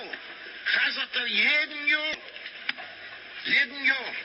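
At 2.11 to 2.14 s, a roughly 30 ms burst of damaged data in a compressed stream breaks the audio. Corrupted bytes make the decoder misread those frames and lose sync until it locks onto a valid frame header, leaving a short glitch in the sound.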